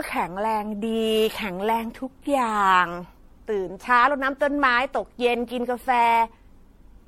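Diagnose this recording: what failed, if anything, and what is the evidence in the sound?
At the codec stage, the speech was likely re-encoded as MP3 about seven times, at a quality consistent with 64 kbit/s. This is generation loss: each pass requantises on a shifted frame grid, so noise and spectral holes accumulate. Throughout, the sound is swirly and hollow, attacks smear, and nothing remains above 16.5 kHz.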